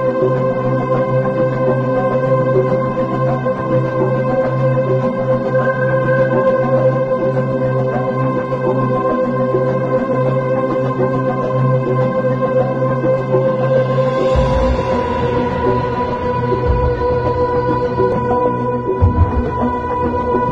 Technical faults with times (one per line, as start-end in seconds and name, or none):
none